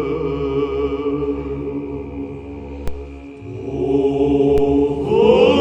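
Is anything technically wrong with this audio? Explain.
Yes. Two low thumps land at 2.88 s and 4.58 s, each a DC step. The waveform's zero line jumps by about -11 dBFS and then drains away through a 5 Hz high-pass, so each jump sounds as a dull knock while the sound continues unchanged.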